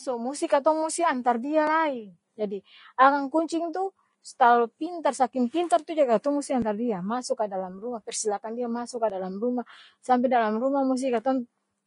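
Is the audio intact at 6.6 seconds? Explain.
No. At 6.62 s there is a skip: roughly 30 ms of audio is gone and the two sides are butted together with no silence between them. This is likely audio missing between chunks, where a recorder or processor working in blocks, here consistent with 2.5 s chunks, drops a sliver at the handover from one block to the next.

That moment also carries the grainy, hissy texture present across the whole speech clip, with nothing above 10.6 kHz and plainly audible coding damage. This points to Vorbis compression at a low bitrate, around 30 kbps, where coarse quantisation turns treble detail into noise and roughens tones.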